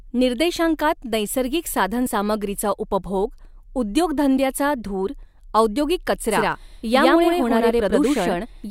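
At 6.31 s a doubled audio track starts abruptly and runs to the end. An equally loud copy trails by roughly a tenth of a second, with no decaying repeats, unlike an echo, likely from a second capture path.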